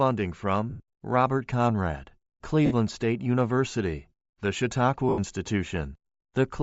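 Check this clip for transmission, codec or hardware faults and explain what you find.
Two faults are audible: a codec coloration over the whole speech clip, and three brief dropouts where the link lost data.

Bluetooth LC3 compression is the likely cause of the coloration throughout. Its encoder discards much of the upper spectrum and fills it with synthetic noise, which points to a rate around 32 kbps with 10 ms frames. The speech carries a plainly audible breathy, grainy edge.

Lost LE Audio frames occur at 0.70 to 0.80 s (100 ms), 2.66 to 2.73 s (50 ms) and 5.09 to 5.19 s (90 ms). The decoder bridges each gap by repeating the last spectrum with scrambled phases and fading it, so the speech smears into noise.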